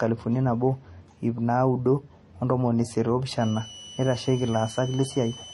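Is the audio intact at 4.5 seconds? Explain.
No. A high, slightly wavering whistle near 3 kHz sits about 20 dB below the speech from 3.41 s, just after "naudo o ntomoni isiet", to the end at 5.53 s. This switching supply whistle comes from a power supply's switching frequency falling into the audible band, and its pitch drifts between about 2.9 and 3.0 kHz.

Underneath, the sound has a dull character, with nothing above 11.4 kHz. The likely cause is transcoding between lossy codecs: an MP3 pass was re-encoded as HE-AAC, so the artefacts from both codecs combine and the lowest cut-off in the chain remains.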